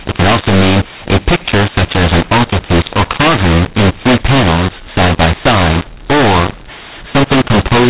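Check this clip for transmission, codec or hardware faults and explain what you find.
One fault runs through the whole clip: mu-law and A-law mixed up. The speech was coded as G.711 mu-law but decoded as A-law, so each 8-bit code lands at the wrong point on the logarithmic scale. Loud and soft samples come out at scrambled levels, giving harsh, distorted speech, and the quietest samples are lifted well above silence, so pauses fill with noise. The telephone coding itself, at 8 kHz sampling, shows as the band ending at 4 kHz and a faint quantisation noise about 38 dB under the signal.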